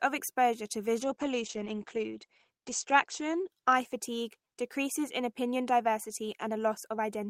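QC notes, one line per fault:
1.04–4.75 s, call bitrate drop: right after "exposure to" the speech turns rough and watery, and the top end collapses from about 20 kHz to an 8 kHz ceiling, leaving it muffled. The encoder was given far fewer bits, so it quantised more coarsely and dropped the high band. The degradation fits a fall from about 40 kbps to about 12 kbps. It is worst for about 1.9 s, then clears by "in opinion".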